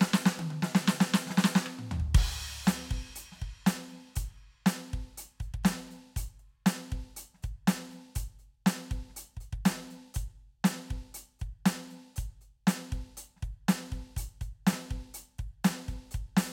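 Listening to the music in this clip, nothing stood out as a technical problem at any point.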